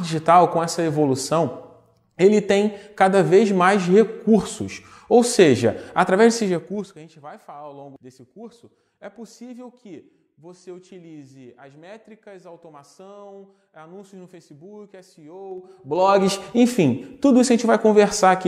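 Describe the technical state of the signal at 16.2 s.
At 16.2 s the signal is in zipper noise, running from 15.48 to 16.28 s: a level change of roughly 25 dB applied unsmoothed in 2 dB steps, about fifteen a second, each step clicking. It ticks audibly.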